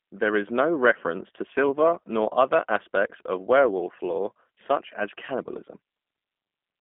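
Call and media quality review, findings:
G.729 codec in media path, full clip; low-rate coding consistent with 8 kbit/s. Speech rebuilt from vocal tract filter, pitch predictor and sparse pulse excitation, so plainly rough, synthetic texture. Telephone band about 200 Hz to 3.4 kHz, nothing above 3.5 kHz.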